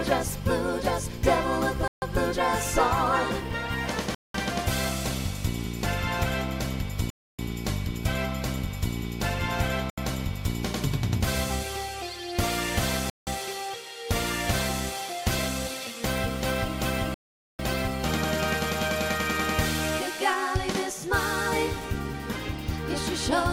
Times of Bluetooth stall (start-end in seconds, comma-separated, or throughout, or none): 1.88-2.02, 4.15-4.35, 7.10-7.39, 9.90-9.98, 13.10-13.27, 17.14-17.59